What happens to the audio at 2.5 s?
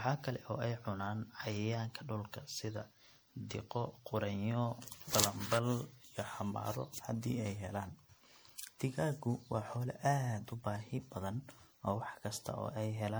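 At 2.5 s the speech sounds swirly, hollow and smeared, with consonant onsets blurred and a watery texture. That texture runs through the whole clip rather than starting there. It is likely generation loss: the audio seems to have been decoded and re-encoded as MP3 about five times, at a rate around 96 kbit/s. Each pass quantises on a shifted frame grid, so noise and spectral gaps pile up beyond what that bitrate alone would leave.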